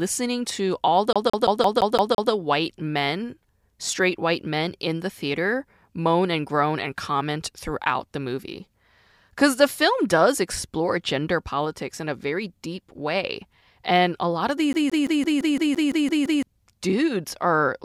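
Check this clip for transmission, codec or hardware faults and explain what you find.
Two instances of the same hardware fault appear in this speech clip. CD stuck on one turn, 1.13 to 2.32 s after "to all" and 14.73 to 16.43 s after "a lot of": a disc scratch keeps knocking the laser back one track, so a 0.17 s fragment repeats with brief mutes, seven and then ten times, as a rapid, even stutter.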